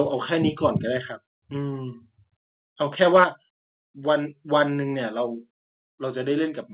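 At 1.02 s the microphone volume was likely stepped down by the call software, cutting input gain by about 2 dB in one move, so the speech and the background it carries drop together, a small but sudden loss of level with nothing in the sound to explain it.

From 3.02 to 3.24 s the input gain was likely set too high, causing microphone overload: peaks drive about 4 dB past the converter's ceiling, and a few percent of samples are flattened. The loudest syllables pick up a harsh, crackling edge.

Right after that clipped stretch, at 3.24 s, the microphone volume is likely stepped down again, this time by about 6 dB. The level falls abruptly and clearly, and the drop sounds like a reaction to the distortion just before it. Throughout, the G.711 call path band-limits the speech to below 4 kHz.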